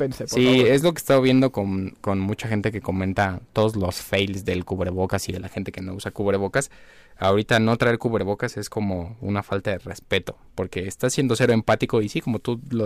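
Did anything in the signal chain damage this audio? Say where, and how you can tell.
Yes. Loud speech turns harsh and crackly at 0.37–1.46 s, 3.19–3.65 s, 4.14–4.22 s, 7.24–7.94 s, 10.13–10.17 s and 11.05–11.84 s. This is hard clipping: a converter or gain stage was overdriven by about 4 to 8 dB, flattening the peaks and adding high harmonics.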